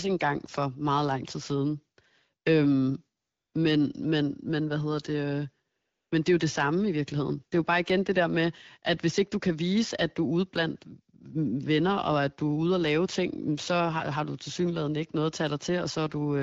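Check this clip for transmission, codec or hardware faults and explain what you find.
Two short stretches of AMR comfort noise stand out, at 3.21 to 3.53 s and 5.79 to 6.11 s, each about 320 ms long, within speech carried over an HD Voice link whose light coding character fits AMR-WB at around 12.65 kbit/s.

In both gaps, the sending handset decided the talker was silent and stopped transmitting speech frames. The receiving end then generated synthetic noise from a rough description of the background's level and spectral shape. The real room tone is replaced for those 320 ms by a smooth, uniform hiss that switches in and then out again, giving a brief change in background texture at each boundary.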